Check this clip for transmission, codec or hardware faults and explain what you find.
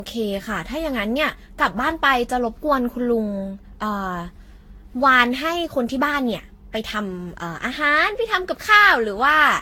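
One fault runs through the whole clip: generation loss. The speech was likely decoded and re-encoded around ten times, each pass requantising on a shifted frame grid so the errors stack. The sound points to repeated Vorbis passes near 65 kbit/s. The result is swirly, hollow and smeared, with blurred attacks and nothing above 18.9 kHz.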